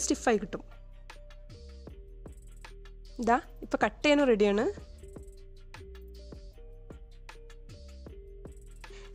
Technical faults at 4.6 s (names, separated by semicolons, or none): none